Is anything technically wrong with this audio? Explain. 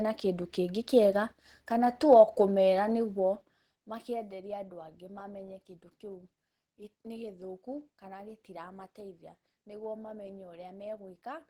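Yes. Opus compression is plainly audible throughout the speech. The sound is hoarse, rough and muffled, with grainy texture. It likely comes from Opus running in its hybrid speech mode at a rate that fits about 16 kbps, where bits run short. Content still reaches about 20.1 kHz.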